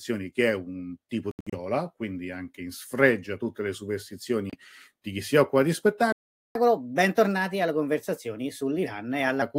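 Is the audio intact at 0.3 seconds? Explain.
Yes, the speech at 0.3 seconds is intact, with no audible fault at that moment.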